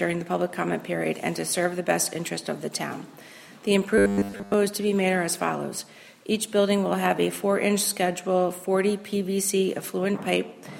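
From 3.98 to 4.54 s, audio likely arrived too seldom and a 10 ms slice was looped: robotic sound from repeated short buffers, a rigid, metallic 100 Hz buzz.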